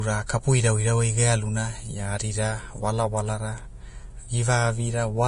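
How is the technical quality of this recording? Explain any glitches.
The speech is marred by heavy codec damage from start to finish, audible as a hissy, grainy texture with roughened tones and smeared consonant onsets, and with nothing present above 10.6 kHz. This is likely Vorbis compression at a low setting, which fits a bitrate around 30 kbps. The encoder kept a smooth outline of the spectrum but quantised the treble so coarsely that fine detail turned into noise of similar energy, and it cut the top band away entirely.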